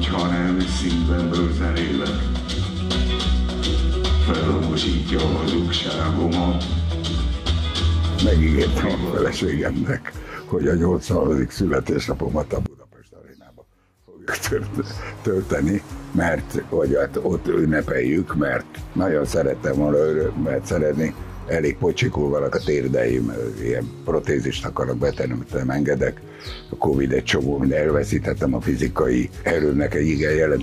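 One channel inverted, 12.66 to 14.28 s: the sound drops about 25 dB to a faint residue, likely from one channel's reversed polarity cancelling shared content in mono.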